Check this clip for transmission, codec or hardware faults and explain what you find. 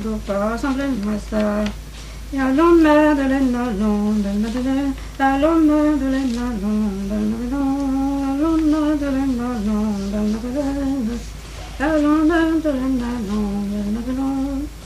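No transmission, codec or hardware faults.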